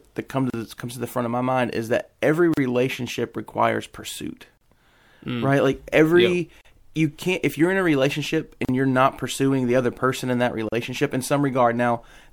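Separately encoded pieces of this speech recording were joined end to end without trimming the encoder delay at each piece's start or the padding on its final frame. That leaves a gap at a join of encoded pieces roughly every 2 seconds, at 0.50, 2.54, 4.57, 6.61, 8.65 and 10.69 s. Each is a silence of about 36 to 38 ms with smeared edges, after which the speech resumes where it left off.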